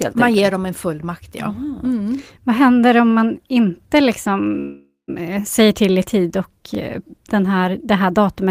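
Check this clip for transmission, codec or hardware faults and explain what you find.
Two faults are audible: a call audio freeze and a join between overlapping chunks.

From 4.59 to 5.10 s, just after "händer om man inte", there is a call audio freeze. Packets were likely delayed long enough to empty the jitter buffer. The receiver extended the last sound for about 0.49 s, fading it to silence for the final 150 ms. Playback then resumes at "eh säger till i" with nothing lost, but it now runs about 0.49 s later.

At 6.75 to 6.77 s, between "till i tid och" and "eh den här det", overlapping chunks cause a short stutter. The audio was handled in 4 s blocks, and this block began about 23 ms before the previous one ended. That 23 ms piece plays twice at the join and is heard as a brief click-like repeat.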